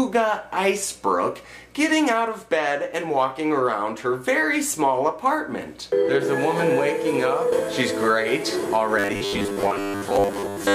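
From 8.99 s to the end at 10.74 s the sound turns into a rigid metallic buzz at 100 Hz, robotic sound likely from repeated short buffers: a 10 ms chunk loops over most of that stretch. Spectrograms show evenly spaced 100 Hz harmonic lines; waveforms show identical repeating cycles.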